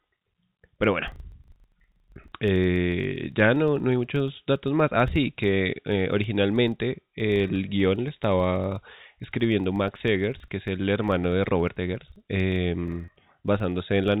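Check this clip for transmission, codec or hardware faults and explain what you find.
Two faults are present: a steady block-rate buzz running through the whole clip and one brief packet loss near the end, both heard over the narrowband G.711 telephone coding, whose cut-off at 4 kHz is plain in the muffled top end.

Filter restarted on every block runs from start to finish. A filter in the chain discards its memory at each block boundary and starts again from silence, so every block opens with a small transient. These arrive 25 times a second, which points to blocks of about 40 ms, and they form a low buzz whose loudness rises and falls with the speech. On a waveform, small spikes sit at a regular 40 ms spacing. On a spectrogram, faint vertical lines appear at the same spacing, strongest where the speech is loudest.

Packet loss with pitch repetition occurs at 13.05 to 13.08 s, where about 30 ms of audio, one packet, went missing. 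The receiver filled the gap by repeating the last pitch period and fading it down. Because the gap is short, it sounds like a slightly held, buzzy sound rather than a dropout. A waveform shows identical repeated cycles of shrinking amplitude. A spectrogram shows flat, unchanging harmonics for that short stretch.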